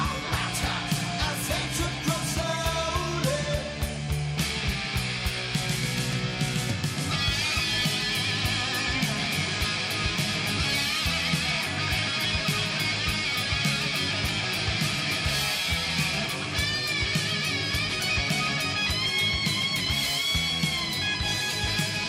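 Nothing is technically wrong with this audio.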